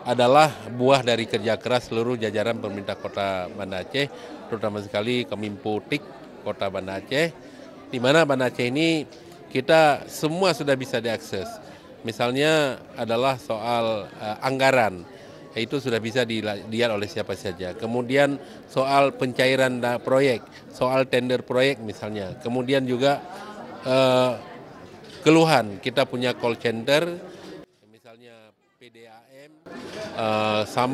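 Near the end, from 27.64 to 29.66 s, one stereo channel is likely inverted, so summing to mono cancels the content common to both sides. The centred material and low end all but disappear, the level dropping by about 25 dB to a faint residue.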